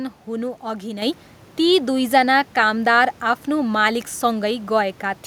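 At 1.02 s the microphone volume steps up: the input level of the capture device was raised in a single jump of about 6 dB, so the speech and the room noise beneath it, sitting about 26 dB below the speech, get louder at the same instant. On a waveform the envelope widens abruptly at that point. On a spectrogram every band brightens together along a sharp vertical edge, including the quiet noise floor between syllables.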